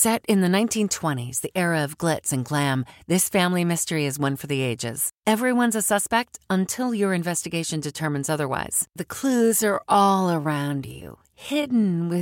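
From 9.22 s to the end, software likely stretched the audio to fill a longer span, running it at 0.65 times its pace and holding pitch by repeating short fragments. In this time-stretched section the speech slows abruptly and drags, its pitch unchanged.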